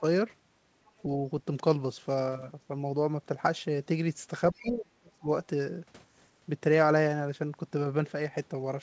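At 0.86 to 1.02 s there's a very faint scrap of the other side's voice leaking through, far below the talker, likely loudspeaker echo the canceller didn't fully remove. From 4.53 to 5.29 s the talker's speech is suppressed in double talk, dropping steeply, likely because the canceller ducked everything while both sides talked. A brief, clearer burst of leaked far-end voice comes through at 4.55 to 4.7 s. The band stops at 8 kHz throughout, which fits a G.722 call path.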